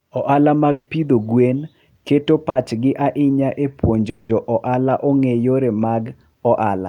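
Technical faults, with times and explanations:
0.71 to 0.89 s, long network dropout: the speech breaks off and the last sound is stretched into a buzz or hiss that fades, filling about 160 ms in all, the last 60 ms of it silence, before speech resumes further on. About 160 ms of speech is gone. This is likely a stall in arriving audio, with the receiver concealing the gap by extending and attenuating its final sound.
2.49 to 2.57 s, burst of packet loss: a brief held, fading sound of about 60 ms replaces the speech, and the speech picks up with about 60 ms missing. A short run of lost or late packets leaves the receiver to repeat the preceding sound and turn it down until new audio arrives, which produces the short smeared tail rather than a clean gap.
4.09 to 4.31 s, long network dropout: the concealed stretch runs about 200 ms, a fading continuation of the preceding sound with no silent section before speech returns. 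About 200 ms of speech is skipped. The likely cause is again an interruption in incoming audio, with extrapolation covering the whole gap and the speech jumping forward when it resumes.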